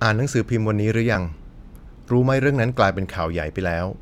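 At 1.14 s the speech is interrupted by a brief blip caused by damaged data in the compressed stream. Corrupted bytes left the decoder unable to read the affected frame correctly, so it lost sync and searched for the next valid frame header before playback resumed.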